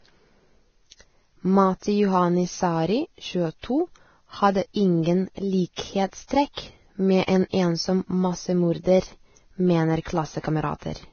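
Transcoding between lossy codecs runs through the whole speech clip: nothing sounds above 6.6 kHz, and smeared, warbly artefacts are heard together with crunchier ones, likely a low-rate Vorbis encode re-encoded as MP3 around 48 kbit/s.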